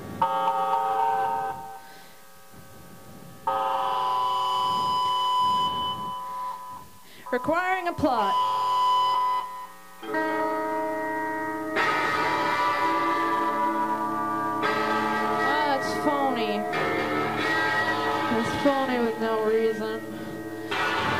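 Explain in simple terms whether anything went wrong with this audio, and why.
Low bit depth with dither: the sound was stored with 8 bits, leaving a fairly loud, even hiss throughout, without the gritty distortion plain rounding causes.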